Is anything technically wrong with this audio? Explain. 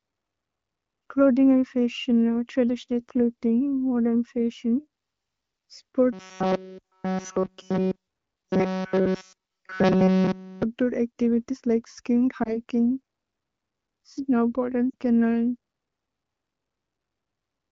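Yes. Two kinds of fault are audible in this speech clip.

From 6.13 to 10.63 s the speech takes on a robotic sound from repeated short buffers. It has a stiff, metallic buzz pitched at 188 Hz that tracks the speech only loosely. The likely cause is audio arriving too slowly, so the playback side keeps replaying its most recent fragment instead of fresh material. A 188 Hz buzz fits a repeated chunk of about 5.3 ms, and essentially the whole stretch sounds like this.

Lost AMR speech frames show up twice. At 12.43 to 12.62 s there is a short warble and dip, consistent with one missing 20 ms frame. At 14.90 to 14.95 s a slightly longer drop toward near silence fits two consecutive frames, about 40 ms. In each case the decoder bridges the gap by repeating the last valid pitch and vocal tract settings at reduced gain, and the speech recovers briefly rough. The AMR wideband (HD Voice) coding around these events, at a rate consistent with 15.85 kbit/s, adds only light codec colouring.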